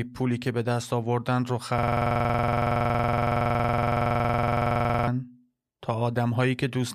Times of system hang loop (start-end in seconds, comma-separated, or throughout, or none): 1.78-5.07